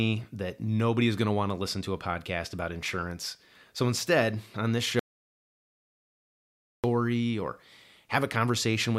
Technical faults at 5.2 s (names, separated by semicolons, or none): audio dropout to silence